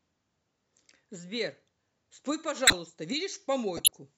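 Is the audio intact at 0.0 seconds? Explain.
Yes, the audio is intact at 0.0 seconds, with no fault present at that moment.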